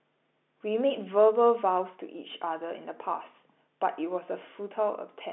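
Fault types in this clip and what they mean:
No faults found; the speech sits on a G.711 mu-law telephone line at 64 kbps, with the band held to about 200 Hz to 3.6 kHz and nothing above 3.9 kHz.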